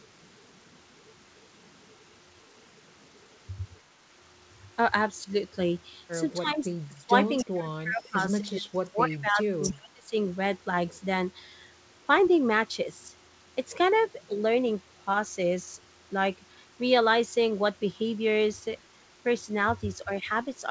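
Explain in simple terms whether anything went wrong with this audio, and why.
The sound dips or drops out in places. This is speech suppressed in double talk. It happens at 5.24 to 5.28 s, 6.39 to 6.75 s, 6.91 to 7.14 s, 7.44 to 8.2 s, 8.44 to 10.13 s, and 20.05 to 20.3 s. The first and last are slight. The middle ones are deep, and the longest lasts well over a second. The likely cause is both people talking at once. The echo canceller could not tell this talker apart from the other side's voice, so it turned everything down.

Twice, a faint delayed copy of the voice slips through. This is an echo leak. It happens at 7.38 to 7.45 s and at 9.62 to 9.73 s. Each copy trails the original by 293 ms and is quieter than the main voice. The second is a bit louder than the first. It likely comes from a loudspeaker on the other end. That side's echo canceller missed some of what its microphone heard and sent it back.

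The call path itself has no high frequencies above 8 kHz, as expected for this kind of call.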